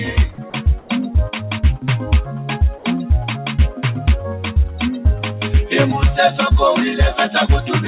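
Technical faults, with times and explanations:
Throughout: noise suppressor applied to non-speech sound. A suppressor tuned for speech stayed active and kept judging steady, sustained parts of the sound as noise, pulling them down while sharper onsets slipped through. Because its gain keeps shifting, the level swings by around 5 dB. Held sounds and decaying tails sink and recover unevenly, so the sound pumps and loses body instead of sustaining smoothly.
0.31–0.59 s: sound cut by the noise suppressor. For roughly a third of a second, the suppressor classed this passage as noise and applied extra attenuation, reaching about 8 dB at its deepest. The steady portion sags noticeably and its decay is shortened, while any attack at the start comes through comparatively intact. The result is a brief, hollow dip where the sound should hold.
0.80–0.89 s: comfort noise in place of the background. 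For 90 ms the real ambience, sitting about 32 dB below the loud parts, gives way to a smooth, featureless hiss. This is likely caused by the sender's voice detection pausing transmission and the receiver filling the gap with synthesized noise. The level stays matched, so the only clue is that the background briefly loses its texture and detail.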